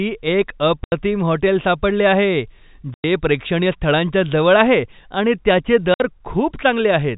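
Three abrupt holes cut into the speech. The first runs from 0.84 to 0.92 s, just before "हॉटेल सापडले आहे". The second, from 2.94 to 3.04 s, falls between "हॉटेल सापडले आहे" and "प्रेक्षणीय स्थळांच्या जवळ आहे". The last, 5.94 to 6.0 s, follows "जवळ आहे आणि त्याचे". This is packet loss filled with silence. Gaps of 80, 100 and 60 ms fit whole 20 ms packets dropped and replaced by nothing. The telephone-band G.711 sound carries on between them.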